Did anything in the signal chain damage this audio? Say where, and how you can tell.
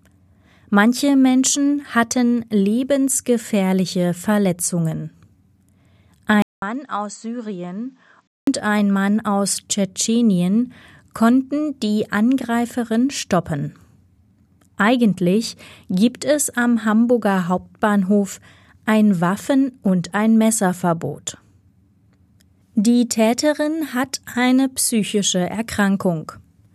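Yes, at the input device. A 200 ms gap opens at 6.42 s. Then the sound drops about 10 dB and stops at 8 kHz, until 8.47 s. The input likely switched to a poorer device.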